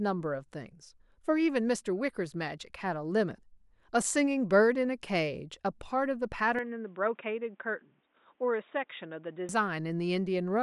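Input switched to a poorer device from 6.59 s to 9.49 s in this speech recording: with no gap at the switch, the sound abruptly turns duller and boxier, with nothing above 3.8 kHz, drops about 5 dB in level, and picks up a faint new noise floor, likely from a change to another microphone or headset profile.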